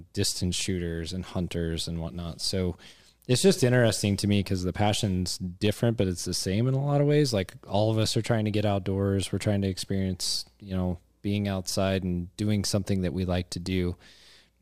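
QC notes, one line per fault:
No faults turned up anywhere in this speech clip, so there's nothing to log here.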